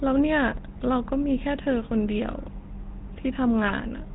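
From the start the speech has that buzzy, gravelly GSM full-rate codec sound, with nothing above 4 kHz. The vocal tract is modelled and driven by a coarse pulse excitation, and the damage is plainly audible, which fits the old 13 kbps full-rate coder.

Then, from about 3.68 to 3.73 s, there's a short gargling squawk. That's GSM bit errors. Corrupted filter, pitch or gain values made the decoder bend the spectrum and jump in level across a stretch that fits roughly two 20 ms frames.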